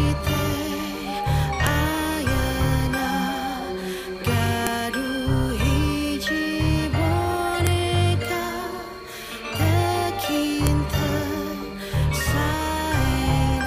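Sharp clicks land at 1.67, 4.67, 7.67 and 10.67 s, every 3 s, a file header played as audio, where leftover WAV header bytes at each joined piece snap out as samples.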